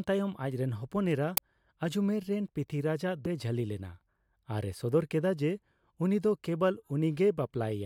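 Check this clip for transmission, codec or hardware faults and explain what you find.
Two faults stand out in this speech recording, one at 1.37 s and one at 3.25 s.

At 1.37 s there is an uninitialised buffer: a block was sent to the output before any audio had been written into it, so whatever stale memory it held was played as sound. It lasts about 5 ms, which fits a 256-sample buffer. It is heard as a sudden harsh crack of digital noise. On the waveform it is a dense rectangular slab of values with abrupt edges. On the spectrogram it is a thin vertical stripe spread across the whole frequency range.

At 3.25 s there is damaged data in a compressed stream, a brief event under 20 ms. Corrupted bytes made the decoder misread the frame there and lose its place until it found the next valid frame header. It is heard as a short chirpy blip in the speech. The spectrogram shows a small smeared patch with an odd tonal or blocky texture, and the waveform shows a discontinuity where the audio resumes.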